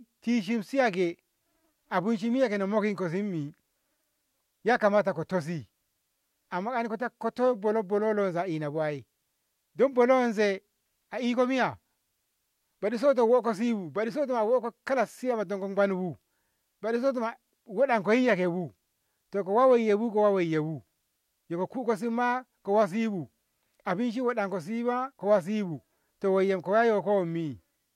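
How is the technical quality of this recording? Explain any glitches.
Listening closely to the whole recording, nothing stood out as a technical glitch.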